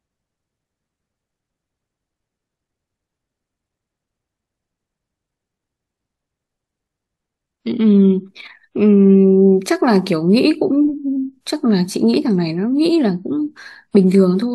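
A brief chirp or burst of noise from 14.12 to 14.15 s, peaking around -15 dBFS, is a corrupt frame decoded: a couple of damaged compressed frames played with misread spectral data.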